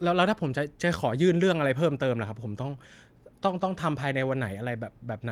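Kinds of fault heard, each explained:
No kinds of fault are heard in this speech clip.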